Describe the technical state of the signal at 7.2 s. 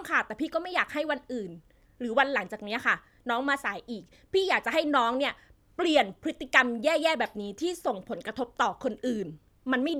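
At 7.2 s the signal is intact, with no dropout, clipping, glitch or other fault audible at that point.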